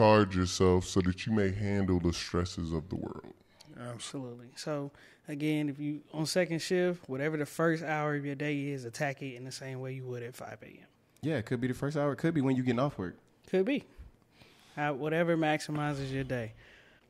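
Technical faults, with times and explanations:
0.00–4.10 s, section at the wrong speed: the opening stretch of speech plays slow, at 0.834 times its recorded rate, so it is drawn out and sits about three semitones low, giving a deep, sluggish quality before normal speed returns at 4.10 s. Speed and pitch shift together because the samples are simply being clocked out more slowly than they were captured, most likely from an editor or player applying the wrong clock rate to that section.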